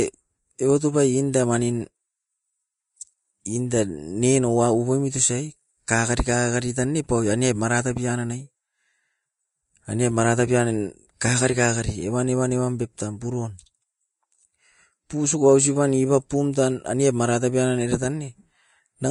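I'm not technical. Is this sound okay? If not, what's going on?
No. The speech sounds dull throughout, with nothing above about 10.6 kHz. This is likely low-bitrate audio saved at a high bitrate: a heavily squeezed copy re-saved as a large MP3. The big file size can't restore the lost detail.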